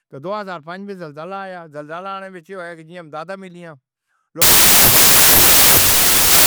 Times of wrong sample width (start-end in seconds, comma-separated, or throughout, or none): 4.42-6.46